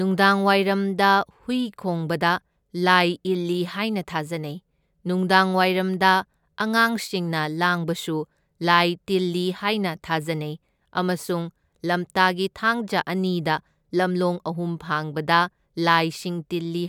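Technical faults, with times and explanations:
Nothing stood out as a technical problem on listening to this speech recording.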